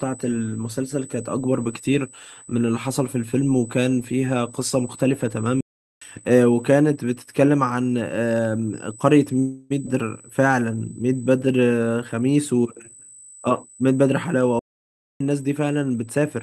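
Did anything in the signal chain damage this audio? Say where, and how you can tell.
Yes. Several stages left their mark, starting with the analogue side and continuing through the buffering and call-transport path.

USB whine sits under the whole clip as a fixed tone at 8 kHz, roughly 25 dB below the speech. This is analogue wiring or grounding: the bus's 125-microsecond microframe current is leaking into the supply or ground and getting onto the audio. Unlike a mains hum, it sits at 8 kHz rather than a low multiple of 50 or 60 Hz, and its pitch never moves with the speech.

There are two playback stalls, from 5.61 to 6.02 s (about 0.41 s) and from 14.59 to 15.20 s (about 0.61 s). In each, the speech simply stops dead and then resumes where it left off. The likely cause is the player at the driver or buffer stage running dry or having its thread blocked. What separates these from a network freeze is the clean silence: nothing fills the gap.

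A call audio freeze runs from 9.39 to 9.72 s. The last sound is stretched into a fading buzz or hiss for about 0.31 s rather than dropping to silence, and the speech then picks up with nothing lost. The likely cause is packets delayed on the network so that the jitter buffer emptied and the receiver concealed the gap. That concealment fill is what distinguishes it from the silent stalls.

A skip ahead follows almost immediately, at about 9.86–9.89 s. Roughly 0.2 s of speech vanishes and the two sides are butted together with only a 4 ms join. This is a network or jitter-buffer drop, probably the buffer discarding audio to recover the delay the freeze just added. Unlike a stall, it leaves no gap. Time is lost from the speech instead.

A jitter buffer slow-down stretches the speech from 10.21 to 11.69 s. It plays at about 88% speed and adds about 178 ms, while the pitch stays put. The receiver is repeating single pitch periods to rebuild its reserve, so sounds are drawn out. 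A tape-style slowdown would drop the pitch as well, which does not happen here.

A jitter buffer speed-up runs from 13.34 to 15.40 s. Speech is hurried to about 115% speed at unchanged pitch, and roughly 0.3 s is trimmed by cutting out individual pitch periods. This is call processing shedding excess delay. It differs from the skip ahead at 9.86 s because the audio is compressed gradually rather than jumping. The second stall falls inside this stretch.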